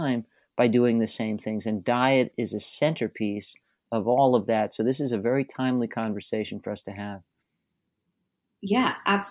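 No technical faults can be heard anywhere in this speech recording.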